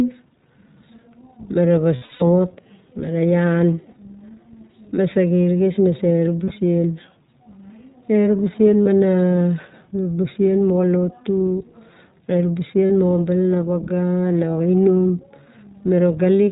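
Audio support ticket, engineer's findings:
Speech carried through iLBC codec end to end: nothing above 4 kHz, plainly audible rough, synthetic edge throughout, consistent with a 20 ms frame mode near 15 kbps. Spectrogram shows a hard ceiling at 4 kHz; waveform shows no gaps or steps from the codec itself.

Lost iLBC frames at 1.96–2.23 s, 6.45–6.52 s, 8.82–8.87 s, 12.86–12.92 s. Held, buzzy vowel-like fill where the decoder repeats the last pitch cycle with noise. First event worst, about 200 ms lost across 240 ms, runs up to roughly 70 ms. Others 40–60 ms. Spectrogram: smeared flat harmonics; waveform: repeating periodic cycles, recovery almost immediate.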